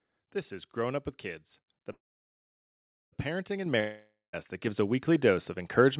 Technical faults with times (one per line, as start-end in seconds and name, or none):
1.92-3.14 call audio freeze
3.66 microphone volume stepped up
3.80-4.35 long network dropout
4.67 microphone volume stepped up